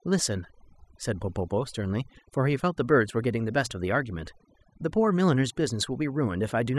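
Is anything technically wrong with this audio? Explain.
Yes. This speech recording suffers from overdone noise removal throughout. A noise reducer set far too aggressively has pushed individual frequency bands down to nothing whenever they came close to its noise estimate, taking the softer parts of the voice along with them. The gaps fall to near silence sprinkled with twinkling specks. A spectrogram would show a dark, empty floor dotted with isolated bright flecks, and speech energy full of holes.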